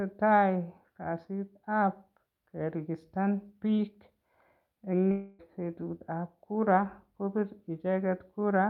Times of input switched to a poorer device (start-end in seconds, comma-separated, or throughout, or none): none